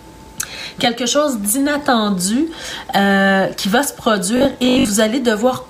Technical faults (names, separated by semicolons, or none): robotic sound from repeated short buffers